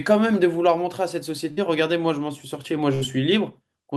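A speech recording with two short dropouts. At 1.51 to 1.60 s and again at 2.95 to 3.04 s, the last sound is held and fades for roughly 55 to 60 ms before the audio jumps ahead. Each is a burst of packet loss: consecutive packets never arrived in time, so the receiver stretched and faded the final sound it had, and resumed with about 60 ms of the speech missing.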